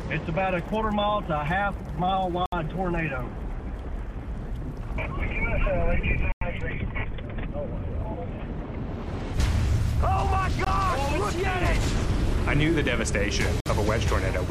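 A wireless link that likely lost packets to interference left the receiver's buffer empty four times, producing a Bluetooth stall each time while playback waited for resent data. The audio drops to dead silence from 2.46 to 2.53 s (65 ms), 6.32 to 6.41 s (94 ms), 10.65 to 10.67 s (21 ms) and 13.60 to 13.66 s (54 ms). Each stall is a clean hole rather than a fade, and the sound resumes abruptly once data arrives again.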